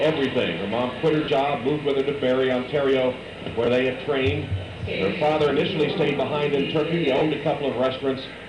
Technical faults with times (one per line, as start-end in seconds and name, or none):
1.24-1.28 lost LE Audio frames
3.65-3.67 lost LE Audio frames
5.50 lost LE Audio frames
7.18-7.21 lost LE Audio frames